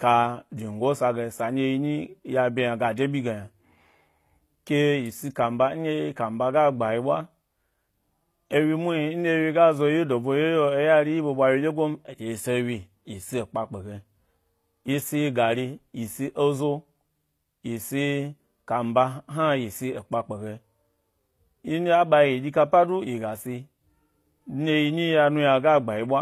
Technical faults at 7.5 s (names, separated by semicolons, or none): HE-AAC compression